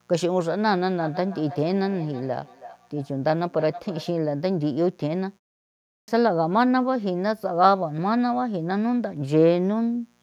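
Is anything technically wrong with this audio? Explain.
Yes, three faults can be heard in this speech.

Mains buzz runs through the whole clip. Sharp switching spikes from something like a dimmer, a rectifier or a missing shield are entering the signal twice in every 60 Hz cycle, so the harmonics stack up well into the kHz range. Rather than a smooth hum, it comes across as a steady, raspy buzz sitting roughly 40 dB under the speech.

Feedback echo between two devices appears from 1.01 to 4.16 s. Two devices in the same room are on one call: one plays back what the other's microphone sent, and that microphone captures it again. Each echo canceller only removes its own device's playback, so the loop survives. Speech returns roughly every 0.3 s, the repeats growing thinner and more ringing, peaking at about 17 dB below the direct speech.

A clipped start after a pause occurs at 5.78 s, ending at 6.08 s. 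After a gap of 0.47 s, the output device dropped into a sleep state and needed time to wake and lock on again. Roughly the first 0.3 s of sound went missing, so the speech resumes abruptly out of silence with its opening sounds cut away.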